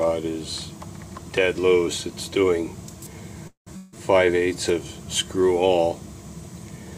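Two network faults fall close together in the middle of this audio. At 3.47 s a call audio freeze begins and runs to 3.69 s. The sound stalls and is stretched into a fading buzz lasting about 192 ms, with roughly 130 ms of that at silence, and then picks up exactly where it stopped. On a waveform this shows as a decaying smear and then a flat line. A spectrogram shows the last frequencies drawn out horizontally before going blank. The likely cause is packets held up in transit until the jitter buffer ran dry, so everything after it plays about 192 ms late, though nothing is lost. Soon after, from 3.77 s to 3.96 s, a long network dropout follows. Here about 160 ms of material never arrives. It is covered by roughly 158 ms of synthesized continuation that never reaches silence, so the waveform keeps a low, smooth envelope instead of dropping to zero. On the spectrogram the bands go blurred and featureless, with no onsets, until the audio resumes further along with that stretch missing. 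The likely cause is a burst of lost packets that the receiver's concealment could only paper over.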